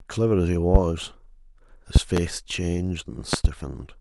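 Loud pops strike the speech at 0.75 to 0.78 s as a single pop, then as a pair at 1.96 to 2.20 s and another pair at 3.33 to 3.48 s. Each peaks around 20 dB above the speech. These are most likely sudden voltage steps, from a switch, connector, static or driver glitch, added to the signal and briefly shaped by the downstream circuitry. They sound like sharp, thumping clicks sitting on top of the speech, which continues beneath them.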